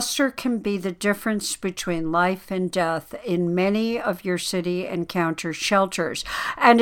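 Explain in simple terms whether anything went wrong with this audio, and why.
Nothing went wrong with this audio, because no fault can be heard anywhere in the recording.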